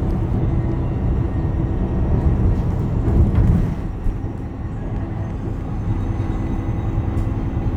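A loud pop, heard as two sharp pops in quick succession between 4.06 and 4.28 s, stands roughly 10 dB above the surrounding sound, which carries on underneath. The likely cause is a sudden voltage step or spike entering the signal path, as from a plug being seated, a switch, a static discharge or a driver glitch. The following circuitry shapes each spike.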